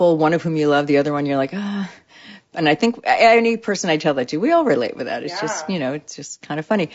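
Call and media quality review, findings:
Speech rough and grainy throughout, noise filling gaps between harmonics, top band dull and synthetic. Likely low-delay AAC compression (AAC-ELD): short frames resolve pitch harmonics poorly, starving detail at a rate consistent with about 32 kbps. Damage plainly audible.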